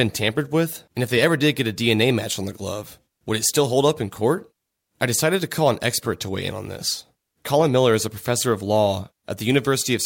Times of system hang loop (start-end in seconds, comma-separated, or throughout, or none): none